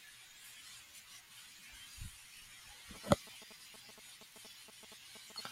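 From 2.95 to 5.41 s there are GSM signalling bursts: a nearby 2G phone's pulses, rectified by the circuit, gallop as short 217 Hz buzzes.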